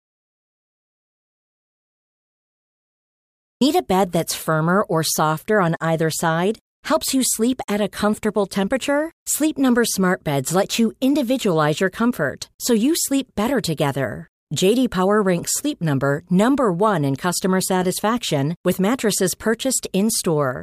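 From the very start until 3.61 s there is nothing at all, dead digital silence with no room tone, and the speech then enters mid-flow. This is an audio dropout to silence, likely from the input being lost while recording continued writing zeros.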